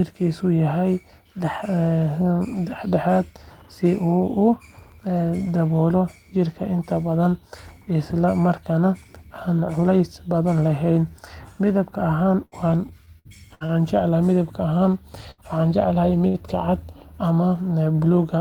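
Speech carrying several network transport faults late in the clip. Two bursts of packet loss, at 12.45 to 12.55 s and 15.31 to 15.41 s, each drop about 60 ms of audio; the receiver extends the last sound for roughly 67 ms, leaving a short buzz or fading hiss before the audio resumes past the gap. Repeated packet loss between 13.06 and 13.72 s punches four holes, the longest 58 ms, concealing about a quarter of that stretch and giving a choppy sound with pieces missing. A short stall from a late packet at 16.28 to 16.37 s empties the jitter buffer, so one sound is held for 64 ms with a slight buzz or dip, though nothing is lost. Finally, a jitter buffer speed-up from 17.46 to 18.06 s trims around 50 ms of pitch-period slices to shed excess delay, so the speech plays about 7% faster at unchanged pitch and sounds hurried.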